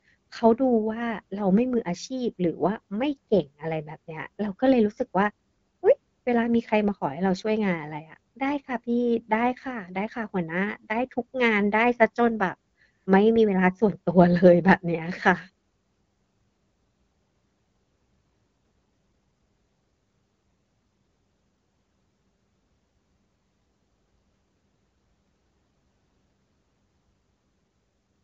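No faults found: the speech passes through the AMR wideband (HD Voice) codec at 12.65 kbit/s, which leaves light coding texture and no content above 7.5 kHz, as that path normally does.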